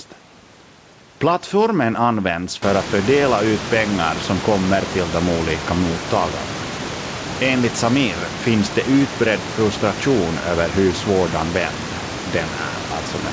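No technical faults are audible.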